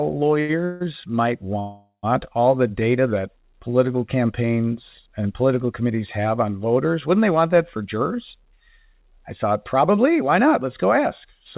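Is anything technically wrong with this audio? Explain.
Yes, there are several playback faults from a call path that cuts everything above 4 kHz, which fits the G.711 A-law codec it appears to use.

From 0.40 to 0.51 s there is a short stall from a late packet. A packet arrived late and the jitter buffer emptied, so the receiver stretched the last sound for about 86 ms. The sound is held too long with a faint buzz, and nothing is lost.

Two call audio freezes follow, at 0.65 to 0.82 s and at 1.59 to 2.05 s. The likely cause is packets held up in transit that starved the buffer. The first is bridged with about 158 ms of fading buzz. The second runs 434 ms and ends in 100 ms of silence before the sound resumes where it stopped.

From 7.77 to 11.40 s there is a jitter buffer speed-up. The receiver trimmed short pitch-period pieces repeatedly to reduce excess buffered delay, removing roughly a fifth of a second overall. 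The speech plays about 5% fast at unchanged pitch and sounds slightly hurried.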